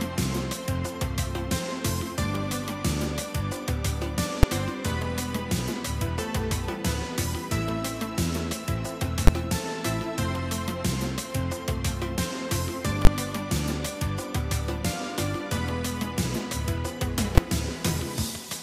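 At 4.43 s, 9.27 s, 13.05 s and 17.38 s the audio gives a sharp, very loud bang. Each is invalid numbers at full scale: a calculation produced infinite or invalid values, which were clamped to the largest positive or negative sample and held there for a whole processing block. The blocks last about 5 ms, 10 ms, 20 ms and 5 ms. These are short enough that each is heard as a single bang rather than separate pops with silence between.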